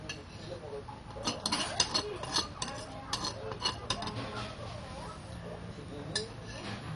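MP2 compression runs throughout: nothing is heard above 11.3 kHz, and the sound is dull, with a gurgling, granular grit. This is likely MPEG Layer II starved of bits, fitting a rate near 48 kbps, switching off upper sub-bands and coarsely quantising the rest.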